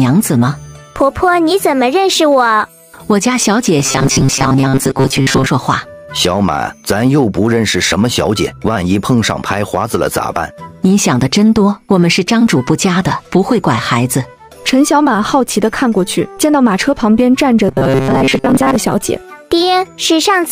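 From 3.79 to 5.46 s, and again from 17.69 to 18.76 s, the audio turns into a rigid, metallic buzz pitched at 134 Hz that still loosely tracks the underlying sound. This is robotic sound from repeated short buffers, likely caused by fresh data arriving too slowly, so playback loops a fragment of roughly 7.5 ms in place of the skipped audio. The loop covers most of each span.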